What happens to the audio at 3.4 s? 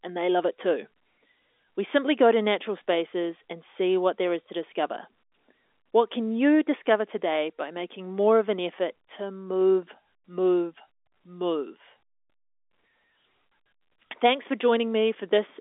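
Nothing goes wrong at 3.4 s. The speech carries on intact, with only the narrow band of G.711 telephone coding, which leaves nothing above about 3.8 kHz.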